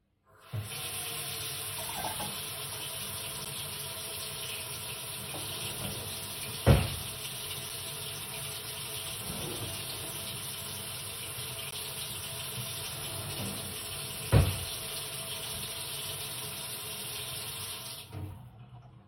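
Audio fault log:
3.45 s, 11.71 s and 14.31 s, block of digital silence: the sound drops abruptly to silence for about 10 ms, 15 ms and 5 ms respectively, then returns with no fade. Each gap is a whole multiple of roughly 5 ms, which points to output blocks of that size not being filled in time. The hard edges on both sides of each hole cut the sound without a fade, and since each gap is under 15 ms, the three events register as brief ticks or dips.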